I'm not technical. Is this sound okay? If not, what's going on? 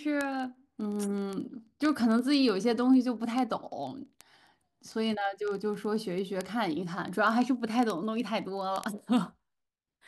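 No. Word clock ticks run from 0.14 s to 10.07 s: steady sharp clicks, about 25 a second, throughout the speech. Two digital devices aren't sharing one clock and drift apart by roughly 0.07 percent, so each slip drops or repeats a sample.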